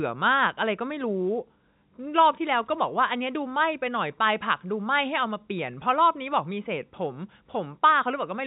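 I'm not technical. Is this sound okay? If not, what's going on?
Yes, nothing here is broken; the speech just has the slightly narrow, phone-line sound of ordinary G.711 telephone coding, which leaves out everything above 4 kHz, and that's exactly how a normal landline call sounds.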